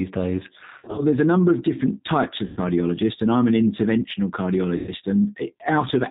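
Throughout, the speech carries the G.729 codec sound. Nothing above 4 kHz survives. Each 10 ms frame is rebuilt from a vocal tract filter, a pitch predictor and a handful of pulses, so the voice comes out noticeably rough and slightly synthetic. The character points to an 8 kbit/s G.729A stream. Plain band-limiting would only dull the sound, whereas this coding adds the buzzy, grainy texture.

Three stretches of VoIP packet loss concealed by the speech codec follow. The first runs from 0.78 to 1.02 s, just before "there's a number of". About 130 ms of audio is missing there, scattered over roughly 200 ms in short runs of up to 30 ms. The second is from 2.47 to 2.60 s, right after "number of different types", and the third from 4.77 to 4.93 s, after "and I'm an interventional". Each of those two replaces about 100 ms. The decoder extends the last pitch and filter with falling gain, so the sound smears into a fading buzzy tone or coloured noise. 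A true dropout would instead go silent or click. Because each frame builds on the previous one, the voice stays weak and distorted briefly after the packets return.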